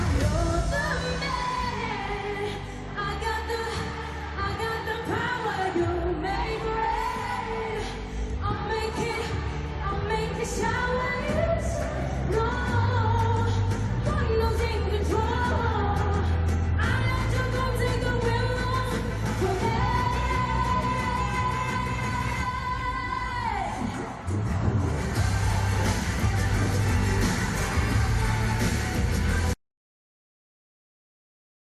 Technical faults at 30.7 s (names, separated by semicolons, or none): audio dropout to silence